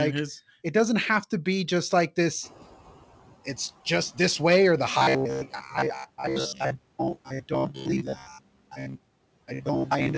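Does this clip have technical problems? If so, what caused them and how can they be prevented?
Yes. There are three kinds of fault.

Noise suppressor catching up: around 2.5 s the room noise jumps by about 24 dB, and from 2.42 to 2.75 s it passes through with little reduction. Over those 330 ms the suppressor's noise estimate catches up and the noise sinks by about 8 dB. A suppressor with faster noise tracking, or steadier room noise, would prevent this.

Robotic sound from repeated short buffers: from 4.98 s to the end, the sound becomes a rigid, metallic buzz at 66.7 Hz. This is likely caused by late packets and concealment repeating the last 15 ms of audio over most of this span while real audio is skipped. A more stable network path and a deeper jitter buffer would prevent it.

Speech cut by the noise suppressor: at 7.16 to 7.51 s (dropping about 13 dB) and 8.15 to 8.42 s (dropping about 18 dB), the suppressor treats quiet speech as noise, so those parts sound swallowed. 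A less aggressive suppression setting would keep these softer segments intact.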